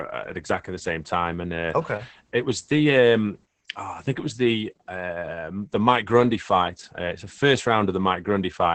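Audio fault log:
throughout: Opus voice compression. The speech sounds muffled, hoarse and faintly robotic because a linear-prediction coder rebuilds it from coarse excitation in 20 ms frames, which fits a bitrate around 10 kbps. Unlike a plain low-pass, it roughens the voice's texture.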